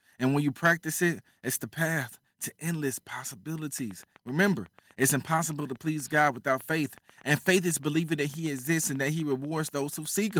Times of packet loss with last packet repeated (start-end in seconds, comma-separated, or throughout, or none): none